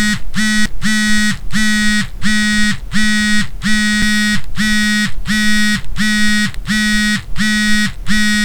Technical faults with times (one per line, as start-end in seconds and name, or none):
0.66 CD skip
4.02 CD skip